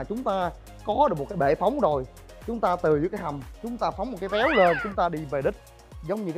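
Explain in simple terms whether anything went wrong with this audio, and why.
Nothing went wrong here.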